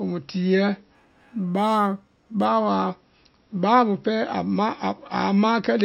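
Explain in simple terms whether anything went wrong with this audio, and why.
Between 0.95 and 2.45 s the speech has imaging from linear upsampling. The audio went from a 12 kHz rate to 48 kHz by joining samples with straight lines, a crude filter. Just below 6 kHz the real top end is dulled, and a faint mirrored copy of the sound fills 6 to 12 kHz, giving a light metallic shimmer on hissy sounds. Plain dullness would just lose the top; this adds a false sparkle instead.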